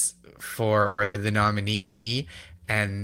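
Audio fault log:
0.81–0.86 s, short stall from a late packet: the speech hangs on its last sound for about 40 ms. A packet showed up late, the jitter buffer emptied, and the receiver just kept extending what it already had until the data arrived, then picked up where it left off. Nothing gets dropped; you simply hear one sound held a touch too long, with a faint buzzy edge, and everything after it lands 40 ms late.
0.86–0.99 s, 1.03–1.15 s and 1.74–2.07 s, call audio freeze: three spots where the speech stops moving and the last sound is stretched into a fading buzz for 120 ms, 110 ms and 320 ms. The first freezes right on the heels of the earlier stall. None of them drops to silence, though the longest one has time to wear down noticeably. The likely cause is packets held up in transit, leaving the jitter buffer with nothing to play. Once they arrive the audio carries on intact, so every freeze inserts a gap rather than cutting anything out.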